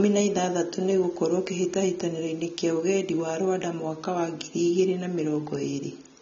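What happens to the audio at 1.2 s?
At 1.2 s, as throughout, the speech is dull above 7.4 kHz and swirly: likely AAC compression at roughly 24 kbps, its quantisation warbling sibilants, unlike a clean low-pass.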